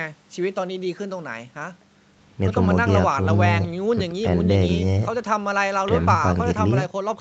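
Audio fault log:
Nothing stood out on listening to this speech recording.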